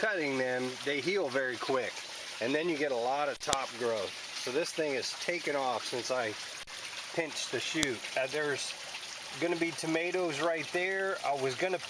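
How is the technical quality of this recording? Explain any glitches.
The recording has two sharp, loud clicks, one at 3.53 s and another at 7.83 s, each lasting only about a millisecond and landing regardless of what the sound is doing at that moment. These are a file header played as audio: the recording appears to be separate WAV pieces joined or streamed back to back with their headers left in, so a few dozen bytes of header data are read as samples, producing a snap at the start of each new piece.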